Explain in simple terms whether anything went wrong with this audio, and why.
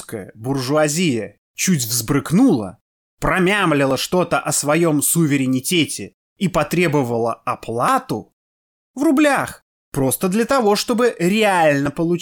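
The speech skips three times, at 3.91, 7.88 and 11.86 seconds. Each time a tiny sliver of sound vanishes and the two sides join with no gap. The skips come every 4 seconds, so this is likely audio missing between chunks, lost while the recorder switched chunks.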